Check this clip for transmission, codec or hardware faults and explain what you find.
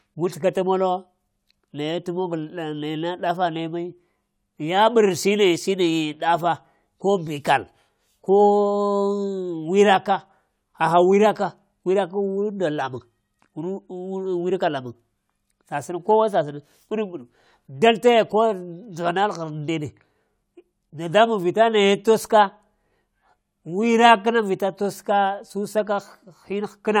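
No transmission, codec or hardware faults can be heard anywhere in this speech recording, and the signal holds steady without dropouts, distortion or timing disturbances.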